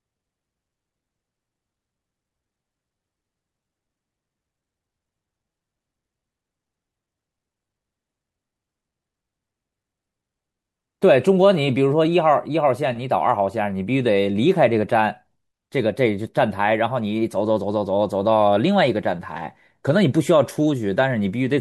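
No technical faults can be heard anywhere in the speech. Nothing in the audio calls for a timestamp or an explanation.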